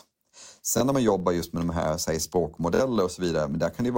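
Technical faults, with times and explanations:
Throughout: filter restarted on every block. A filter in the chain drops its memory at each block boundary and starts again from silence, so every block opens with a small transient. These arrive 25 times a second, every 40 ms, and merge into a 25 Hz buzz that swells and fades with the speech level. On a spectrogram this shows as evenly spaced thin vertical lines through the voiced regions, and on the waveform as a tiny step or kink at each 40 ms boundary.
0.78–0.81 s and 2.75–2.80 s: Bluetooth stutter. Audio went missing in transit and the receiver replayed its last stretch of sound to fill the gap. The first, just before "när man jobbar just", loses about 23 ms and sounds like one brief repeated blip, consistent with a single lost packet. The second, right after "med de här säg", loses about 46 ms and gives a short double stutter, pointing to two packets. 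Speech then resumes further along, as if it had kept playing. On the waveform each gap shows as a short slice copied back to back, and on the spectrogram as a small block of repeated pattern with hard vertical edges.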